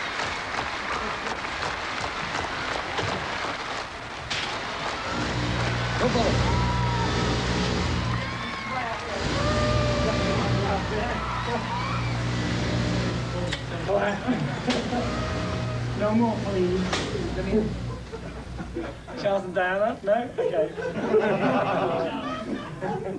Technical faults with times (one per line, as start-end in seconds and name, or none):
none